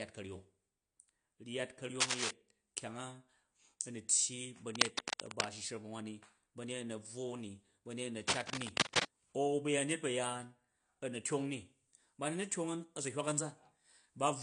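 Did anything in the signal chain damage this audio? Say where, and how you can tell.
Yes. Throughout, the speech sounds dull and smeared, with a fizzy, warbling edge on sibilants and nothing above about 10.1 kHz. That points to the codec stage, likely AAC compression at a low bitrate, about 32 kbps, quantising coarsely and lowering the cut-off.

Bursts of dense, uneven scratching and rustling sit over the speech at 2.0–2.31 s, 4.75–5.46 s and 8.28–9.05 s, the first and last somewhat louder than the speech and the middle one about level with it. This is likely cable scratch noise in the analogue wiring, where a DC voltage across a worn connector's shifting contact resistance adds bursts of noise to the signal.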